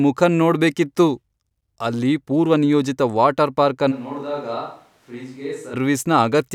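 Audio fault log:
3.93–5.73 s, switch to a distant microphone: right after "ಅಲ್ಲಿ ಪೂರ್ವನಿಯೋಜಿತ ವಾಟರ್ ಪಾರ್ಕ್" the sound suddenly goes hollow and thin, drops roughly 10 dB, and room noise comes up, likely the close mic dropping out.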